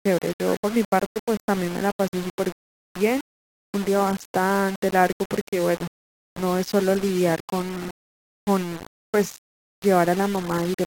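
A speech recording with grainy, gritty distortion throughout that rises and falls with the speech, likely low bit depth without dither, around 5 bits with the error only about 15 dB below the signal. Unlike steady hiss, the grit tracks the sound and vanishes in pauses. A rebuffering stall cuts to silence from 2.53 to 2.90 s, adding about 365 ms. Unlike a dropout, the speech then resumes exactly where it stopped, with nothing missing.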